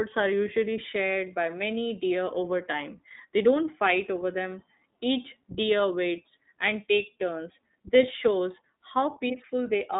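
From start to end the speech passes through the iLBC codec: nothing above about 3.7 kHz or below 200 Hz survives, and each frame, consistent with 20 ms at roughly 15.2 kbps, is coded independently, leaving a plainly rough, synthetic buzz that simple telephone band-limiting would not add.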